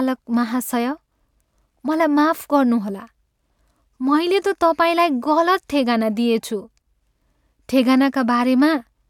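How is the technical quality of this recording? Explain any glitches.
Nothing in the recording stood out as a technical problem on listening, so there are no glitches to explain.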